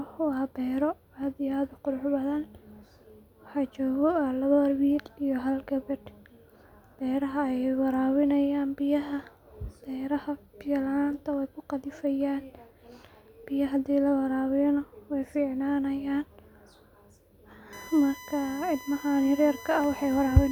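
A fixed-pitch whine rides under this speech clip from 17.73 s to the end at 20.52 s, pitched at 1 kHz and loudest at its 2 kHz harmonic, around 20 dB below the speech. It is USB whine: current drawn in 1 ms bus frames leaking into the audio through power or ground.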